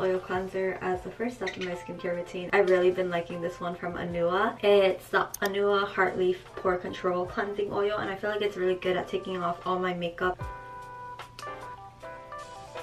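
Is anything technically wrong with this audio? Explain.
No, nothing is technically wrong with this audio.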